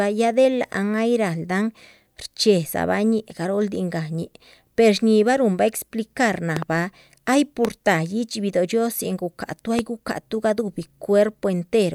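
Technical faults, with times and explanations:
6.57–6.64 s (double), 7.65–7.67 s, 9.79–9.81 s after "guhcahatuh ay": loud pop, likely electrical pulses, about 15 dB above the speech, showing as spikes on the waveform and thin full-height stripes on the spectrogram.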